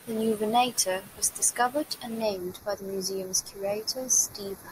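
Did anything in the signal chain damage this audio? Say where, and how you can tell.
Yes. From 2.22 s, right after "was discovered and", to the end, the speech turns hollow and phasey. That is channel delay, heard as comb filtering at a mono downmix. One channel lags by a fraction of a millisecond. Summing cuts evenly spaced notches, the first near 3 kHz.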